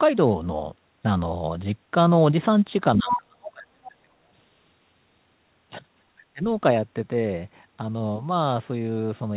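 From 2.96 to 4.17 s the talker's speech dips, falling by about 30 dB at its deepest, with roughly a second of that span affected. This is speech suppressed in double talk: the echo canceller was likely faced with both sides talking at once and turned everything down. Unlike a network dropout, the gaps follow the other side's activity, and the audio shows a narrowband ceiling at 4 kHz that fits a G.711 call path.

At 3.12 to 3.16 s a brief scrap of a second voice comes through at roughly the same loudness as the talker. This is the other side's voice leaking through, likely residual loudspeaker echo the canceller failed to remove. It sounds like a short fragment of a different talker, not a dip in the main voice.

From 6.18 to 6.44 s the same double-talk suppression returns more briefly, affecting about 0.2 s. The level again drops by about 30 dB, and the talker's voice dips.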